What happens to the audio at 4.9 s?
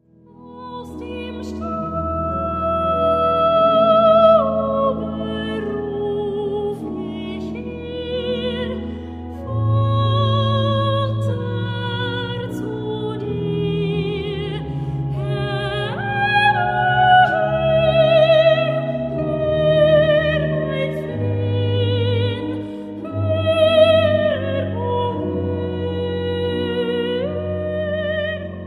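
Nothing goes wrong at 4.9 s; the audio plays through that moment intact, with no dropout, glitch or other fault.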